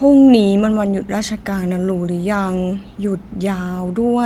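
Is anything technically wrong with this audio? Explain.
No, nothing technically wrong can be heard in this speech recording. There is no fault to point to at any moment of it.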